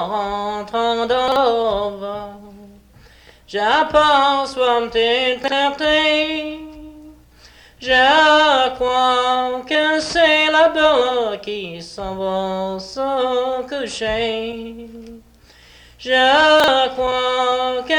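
At 1.28, 5.44 and 16.6 s there's a brief jumbled stutter: chunks out of order. Each time a 40 ms chunk lands one slot late, so two chunks swap over about 80 ms, leaving three hard joins.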